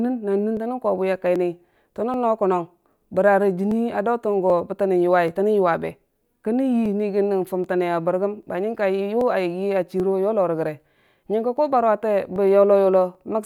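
Two devices in the chain are likely running on separate clocks that disagree by something on the order of a thousand parts per million, so the buffer between them drifts until a small block of a few dozen samples is dropped or repeated. These clock drift buffer slips recur every 0.785 s from 0.57 s to 13.15 s, around fifteen in all, each heard as a brief regular click through the speech.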